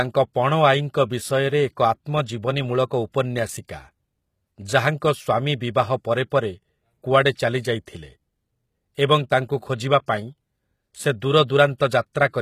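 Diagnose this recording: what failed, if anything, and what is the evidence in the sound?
Codec stage: the treble sounds gritty and synthetic throughout, likely from HE-AAC compression near 20 kbps. On a spectrogram, copied upper bands stop sharply at 14.9 kHz.

Pre-echo, also from the codec: a short hiss precedes attacks at 6.30 s and 10.06 s by 15 and 18 ms. Block-spread quantisation noise shows as a smear ahead of each transient.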